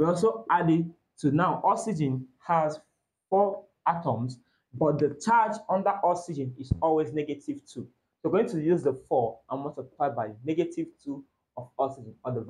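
No technical faults can be heard anywhere in the clip. The audio holds steady throughout, with nothing to flag at any moment.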